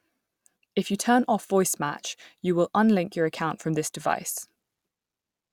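From about 0.11 s to 4.6 s the speech carries a regular click, recurring roughly every 1.13 s, around five times in all. The steady spacing points to clock drift buffer slips. The likely cause is two devices running on independent clocks a few hundred ppm apart, so the buffer between them creeps until a short block of about 15 samples is dropped or repeated. Each slip breaks the waveform briefly and is heard as a pop.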